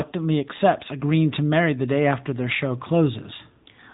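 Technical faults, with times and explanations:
Throughout, AMR narrowband mobile codec: the speech passes through an 8 kHz phone-network coder, so nothing above about 3.8 kHz survives, and the vocal-tract model rebuilt from sparse pulses, at a rate consistent with roughly 10.2 kbps, leaves a plainly audible buzzy, synthetic edge on the voice.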